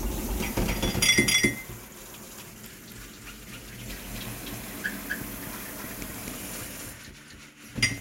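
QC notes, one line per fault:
Throughout, doubled audio track: the audio is likely being captured a second time through a slower path, and both copies are mixed together. A full-band duplicate of the everyday sound trails the original by around 300 ms at roughly the same level, so every event is heard twice, a distinct slap-back rather than reverberation. The second copy carries no decay or room colour, so it sounds like a clean repeat rather than an echo.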